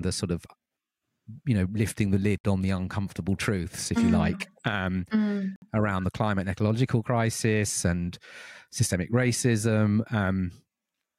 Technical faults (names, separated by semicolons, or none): block of digital silence